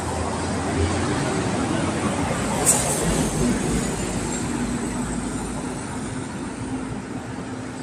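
Nothing stood out as a technical fault on listening to this sound recording.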